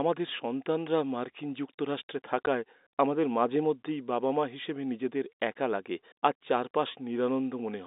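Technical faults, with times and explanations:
2.46 s, packet loss filled with silence: one audio packet failed to arrive, likely a single 10 ms packet, and the receiver played silence in its place. The result is a brief hard-edged hole between "আমাদের সন্তানরা মার্কিন যুক্তরাষ্ট্রে" and "আমাদের মাঝেমধ্যেই বাবা মা".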